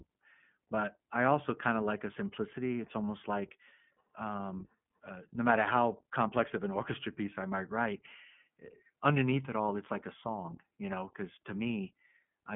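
Throughout, the speech has passed through the iLBC codec, which codes each 20 ms frame independently, consistent with its 15.2 kbps mode. Only 150 Hz to 3.4 kHz survives, so the sound is thin and boxy, with plainly audible rough, synthetic texture.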